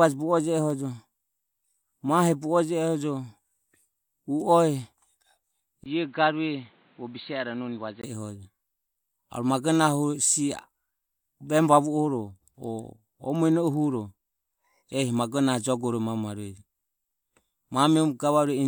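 Speech in which, from 5.84 to 8.04 s, the sound turns dull and boxy after a brief gap, loses everything above 4.5 kHz, drops about 5 dB, and gains faint new background noise, likely because the input switched to a poorer device.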